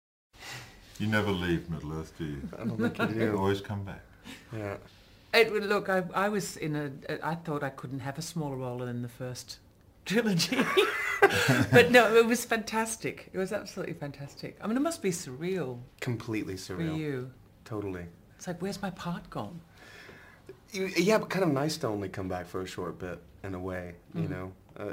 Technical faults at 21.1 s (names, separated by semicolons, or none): sample clock jitter